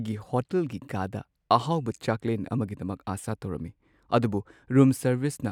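A speech recording with nothing technically wrong with it.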